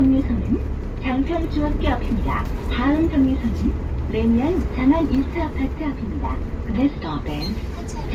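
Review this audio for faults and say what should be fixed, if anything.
Transcoding between lossy codecs runs through the whole clip. Two layers of coding damage sound together. The likely cause is an MP3 encode followed by a second pass through Opus. The second encoder spends bits copying the first one's artefacts and then adds its own. The character fits an MP3 around 59 kbit/s re-encoded to Opus around 48 kbit/s. Nothing is present above 20 kHz. To prevent this, encode once from the original uncompressed source.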